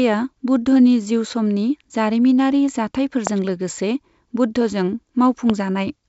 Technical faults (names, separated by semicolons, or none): loud pop